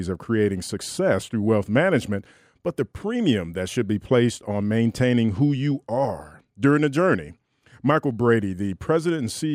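No technical faults can be heard in the speech at any point.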